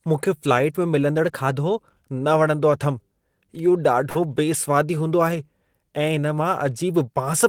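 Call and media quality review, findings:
Speech, 1.26–1.89 s: sudden speed-up of about 5.7% with pitch raised about 95 cents, nearly a semitone, then snaps back. Drift correction step, likely from the clock-sync resampler, which jumped the playback rate in one step to rebalance its buffer.

4.09–4.18 s: burst of packet loss. Decoder concealment extends the preceding sound for about 54 ms as a decaying fill, then playback resumes with about 60 ms of audio skipped. Jitter buffer or network path.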